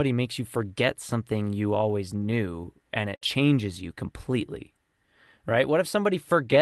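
Right after "forget something you always", at 2.19 to 2.23 s, a brief smear blurs the sound: short concealed packet loss, where about 20 ms never arrived and the receiver extended the previous sound to cover the hole. Overlapping its end, from 2.21 to 2.23 s, and again at 2.31 to 2.33 s and 2.63 to 2.65 s, the sound turns briefly rougher and noisier. Each is a lost packet rebuilt from error correction: a 20 ms frame replayed from the low-bitrate copy carried by the following packet. At 3.15 to 3.23 s the last sound is held and fades out, and the sound jumps ahead to "changes you completely". This is a burst of packet loss, with about 60 ms stretched over by concealment and then skipped, and the final 20 ms of it, 3.21 to 3.23 s, is again rebuilt from error correction. All of this rides on the Opus call path, whose band tops out around 12 kHz and whose coding noise fits a bitrate near 32 kbps.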